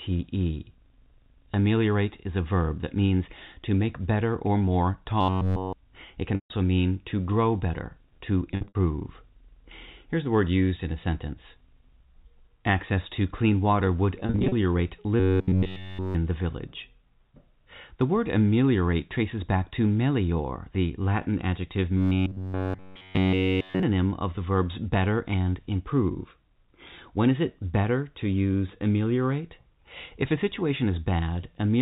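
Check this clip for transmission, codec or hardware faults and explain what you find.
Two kinds of fault show up in this speech, both on the transmission side; the G.711 telephone coding underneath sounds clean, just band-limited to 4 kHz.

Robotic sound from repeated short buffers hits at 5.21–5.73 s, 15.20–16.15 s and 21.98–23.83 s. In each stretch essentially all the audio turns into a rigid, metallic buzz pinned at 93.8 Hz. That's likely the playback side starving and looping the last chunk, about 10.7 ms long, which fits that pitch, while the real audio gets skipped. The speech still roughly tracks through it.

Packet loss with pitch repetition turns up at 6.35–6.50 s, 8.51–8.75 s, 14.20–14.52 s and 24.36 s. The receiver bridges each gap by repeating the last pitch period and fading it out. The first loses 150 ms in one block, so it goes buzzy and fades before speech cross-fades back in. 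The middle two are scattered: 180 ms over 240 ms with a longest run of 70 ms, then 200 ms over 320 ms with runs up to 40 ms. The 10 ms one at 24.36 s is just a brief blip.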